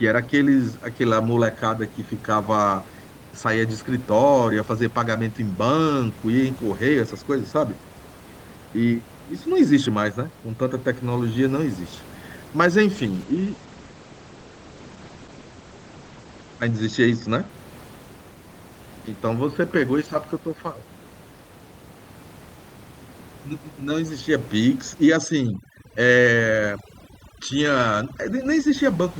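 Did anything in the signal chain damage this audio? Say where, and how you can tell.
Yes, two separate problems, both on the call side rather than in the capture.

From 12.95 s to 17.55 s there's a call bitrate drop. The sound goes rough and dull, with the top end cut off around 8 kHz instead of reaching up near 20 kHz. It sits at its worst for about 3.8 s before recovering. That's the codec responding to a lower bandwidth estimate: fewer bits means coarser coding and a narrower band, which fits a fall from roughly 32 kbps to about 12 kbps.

From 25.08 s to 28.75 s you get overdone noise removal in the call processing. The room noise, which sits about 20 dB under the speech, gets pushed down and breaks up into little twinkly specks. The suppressor is being too aggressive: it's pulling individual frequency bands down whenever they look like its noise estimate, and the quieter parts of the speech get taken out along with the noise.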